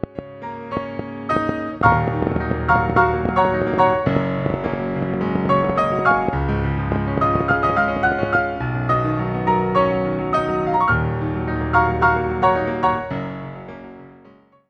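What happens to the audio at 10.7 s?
Nothing goes wrong at 10.7 s; the audio plays through that moment intact, with no dropout, click or distortion.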